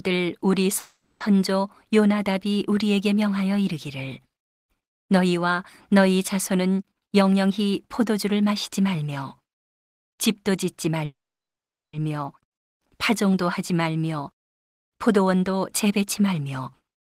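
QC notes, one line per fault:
0.79–1.22 s, call audio freeze: the speech stops and the last sound is stretched into a short buzzy tail that fades, with about 20 ms of true silence before the audio resumes exactly where it left off. About 410 ms of filler is inserted and nothing is lost, which fits late packets draining the jitter buffer as the likely cause. On a spectrogram the harmonics smear into flat horizontal bands that decay. The waveform shows a shrinking repetitive envelope.
6.91–11.04 s, jitter buffer speed-up: the speech runs about 9% fast at unchanged pitch and sounds hurried, with roughly 0.4 s of audio cut out in pitch-period slices to shrink an overfull buffer. A spectrogram keeps normal formant and harmonic spacing but shows syllables compressed in time. The waveform has tiny splice points between periods but no gaps.
11.05–11.95 s, call audio freeze: a brief buzzy continuation gives way to about 0.79 s of silence. 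The audio then picks up from the same point, with 880 ms added and nothing missing. Packets stalled in transit and starved the buffer is the likely cause. On a spectrogram this looks like a short smeared band followed by an empty block. The waveform shows a flat line in the gap.
15.08–17.15 s, jitter buffer speed-up: the speech is hurried again, about 7% fast at the same pitch, with roughly 0.15 s removed as repeated pitch-period cuts while the buffer sheds excess delay. A spectrogram shows tighter syllable timing but no change in the frequency layout. The waveform is continuous, with periods subtly dropped.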